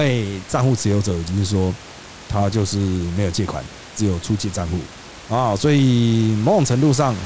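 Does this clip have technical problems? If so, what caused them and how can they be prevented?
No, there are no technical problems in this speech clip. The room's background noise sits about 18 dB below the speech, and the audio stops at 8 kHz, which fits a wideband call codec such as G.722.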